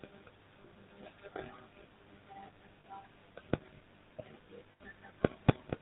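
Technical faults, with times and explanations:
Throughout: mains buzz. There's a steady, raspy 50 Hz buzz sitting roughly 25 dB under the speech. It isn't a clean hum because something like a dimmer, rectifier or poor shielding is letting sharp switching spikes through twice per mains cycle. Those spikes carry a long ladder of 50 Hz harmonics reaching up into the kilohertz range, which is why it sounds gritty rather than like a smooth low tone.
Throughout: GSM full-rate codec. The speech has that gravelly, buzzy roughness you get from the original GSM codec, and it's plainly audible. The codec rebuilds the voice from a vocal-tract model fed by evenly spaced pulses, keeping only a third of the excitation detail. That sparse drive gives the grainy texture. There's also nothing above 4 kHz, so it sounds dull and boxy, consistent with the 13 kbps full-rate mode.
0.62 s, 2.80 to 2.85 s, 4.72 to 4.81 s: lost GSM frames. 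At each of these spots the sound briefly freezes into a rough, metallic ring before the speech picks up again. The dropouts last about 20 ms, 40 ms and 80 ms, which fits one, two and four lost 20 ms frames. The decoder fills each gap by repeating the last good frame's settings. That stuck spectrum is what rings.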